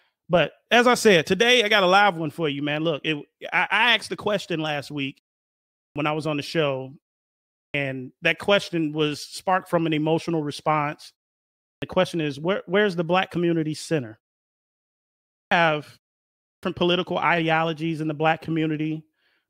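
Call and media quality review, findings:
Clipped start after a pause at 5.75, 7.52, 11.61, 15.3, 16.4 s: 0.21–0.23 s of onset lost after 0.5–1.2 s gaps; output device waking from sleep. Waveform shows an abrupt full-level start with no rising edge.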